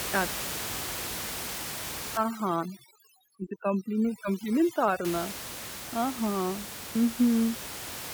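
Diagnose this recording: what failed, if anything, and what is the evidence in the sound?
Overdone noise removal in the call processing stage affects the audio from 2.17 to 5.05 s. The room noise, about 10 dB below the speech, collapses to near silence with twinkling specks. A suppressor set too hard is cutting individual frequency bands whenever they sit near its noise estimate. Quiet parts of the speech fall under that threshold and are removed along with the noise.

At 4.22 s there is a single skip where audio goes missing between chunks. A few milliseconds of sound vanish and the two sides butt together with no silence. The cause is likely a driver or buffer stage that processes audio in 2.5 s chunks and drops a short slice while closing one chunk and opening the next.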